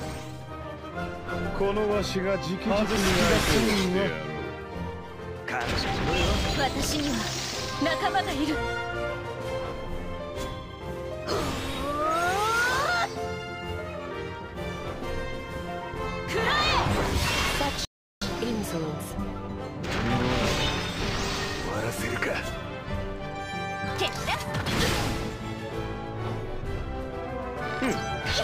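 A playback stall cuts the audio to silence from 17.85 to 18.22 s, a 0.36 s gap, likely the player running out of buffered data or its thread blocking.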